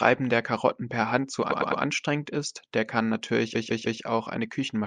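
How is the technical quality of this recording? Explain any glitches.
The speech has two stutters from repeated frames. From 1.51 to 1.82 s, just before "ist der kann", a 104.5 ms block plays three extra times, consistent with about four compressed frames resent. From 3.54 to 4.01 s, after "ist der kann", a 156.7 ms block repeats three times, adding 470 ms.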